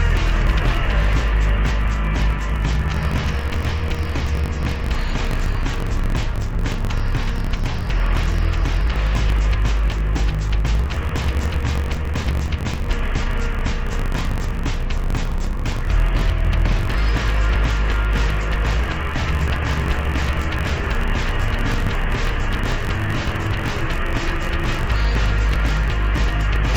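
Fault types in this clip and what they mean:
Interleaved audio read as planar: each block of alternating left and right samples is split in half, the first half treated as left and the second as right, so both channels carry the material at half speed. Throughout the clip the sound drops an octave and takes on a doubled, choppy character, with the block repeating every 21.33 ms, about 47 times a second. This fits a 1024-sample block.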